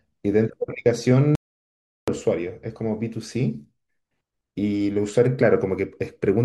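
At 1.35 s the speech cuts out abruptly and stays in dead digital silence, with no room tone, until 2.08 s. This audio dropout to silence removes about 0.72 s of material, likely from the input link or device dropping while the recorder kept writing silence.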